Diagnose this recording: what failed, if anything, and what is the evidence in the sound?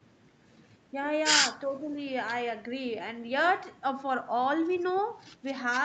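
Speech suppressed in double talk at 1.66 to 1.97 s: the speech dips about 10 dB, likely the call echo canceller attenuating the near talker while both sides spoke.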